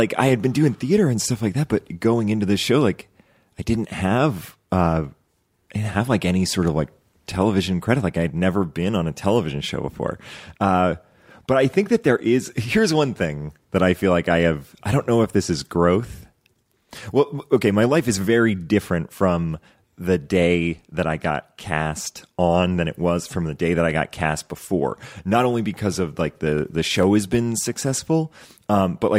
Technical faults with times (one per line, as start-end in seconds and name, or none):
2.03-27.03 clock drift buffer slips